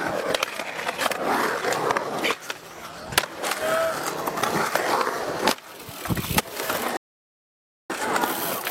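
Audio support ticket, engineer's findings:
Rebuffering stall, 6.97–7.90 s: playback drops to silence for about 0.93 s, then resumes at the exact cut point. Player buffer underrun; no audio lost, time added.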